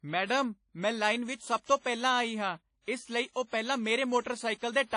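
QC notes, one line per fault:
Throughout: WMA compression. The speech has a washy, ringing quality with a hiss that swells and fades with the voice, and nothing is present above 10.1 kHz. This likely comes from Windows Media Audio encoding at a low rate, around 32 kbps. Long transform blocks smear quantisation noise across tens of milliseconds, and the encoder discards weak spectral lines and everything above about 10.1 kHz to save bits, which leaves the dull, breathing texture.
1.65–1.69 s and 3.33–3.36 s: pre-echo. Just before each of these two sharp onsets a brief hiss rises out of the quiet, lasting about 35 ms and 33 ms, and the attacks sound softened and smeared. The transform codec spreads the noise budget for each block evenly across its length. When a loud attack lands late in a block, noise sized for that loud moment also fills the near-silence before it, where nothing masks it.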